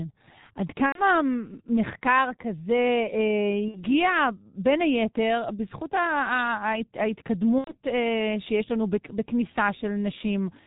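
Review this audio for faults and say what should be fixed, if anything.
Throughout the recording the speech sounds muffled and hoarse, with nothing above 4 kHz and consonants smeared together. That is the G.723.1 codec, heavily damaging the signal. It codes speech in 30 ms frames at a very low rate, which fits its 6.3 kbit/s mode, and its slowly updated voice model cannot follow quick articulation. The coarse, throaty texture and dull top end come from that model. To prevent this, carry the call on a wideband or higher-rate codec such as G.722 or Opus.

At 0.86–1.01 s, 3.68–3.86 s and 7.58–7.74 s the speech is stretched into a buzzy tone or coloured noise that fades out, and it stays thin and distorted for a moment after the sound returns. This is VoIP packet loss concealed by the speech codec. The gaps fit roughly 90 ms, 60 ms and 90 ms of missing audio, or two to three 30 ms frames each. 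With no packets arriving, the decoder repeated its last pitch and filter at falling gain. Because each frame depends on the one before, recovery lags behind the returning packets. To prevent this, reduce network loss with QoS prioritisation and add forward error correction or redundant packets.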